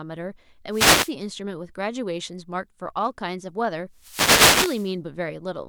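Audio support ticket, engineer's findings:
Wireless microphone noise hits at 0.70–1.13 s and 3.93–4.96 s on speech. Analogue FM link fading from multipath cancellation, so receiver noise surges as static bursts.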